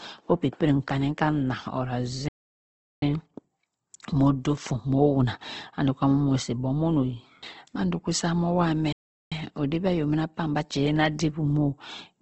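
Throughout the speech there is a grainy, rough texture with a dull top end, likely from Opus compression at a low bitrate near 16 kbps in its music mode. On a spectrogram the energy stops at a hard ceiling around 8 kHz, with smeared, noisy fill below.

At 2.28 s the sound cuts out for about 0.74 s until 3.02 s, and again at 8.92 s for about 0.39 s until 9.32 s. This is a playback stall, likely the player running short of data. Each gap shows as a flat line on the waveform and a blank column on the spectrogram.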